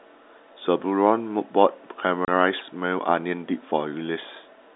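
Packet loss filled with silence hits from 2.25 to 2.28 s, where 30 ms of the speech drops out completely. The receiver had nothing to play for that stretch and inserted digital silence rather than concealing the gap, so the hole has abrupt edges. The length fits three 10 ms packets lost back to back. Around it, the G.711 telephone coding keeps the usual narrow line band.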